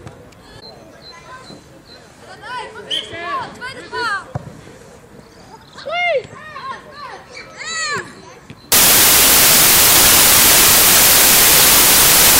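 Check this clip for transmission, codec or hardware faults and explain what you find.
One fault is present. From 8.72 s to the end of the clip, the samples are built from the wrong bytes. The reader misassembles each sample from its bytes, through a byte offset, a swapped order or a wrong alignment. The rapidly changing low-order bits then land in the most significant position. The result is loud, harsh broadband noise replacing the sound.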